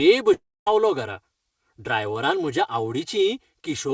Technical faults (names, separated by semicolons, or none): channel delay (comb filtering); long network dropout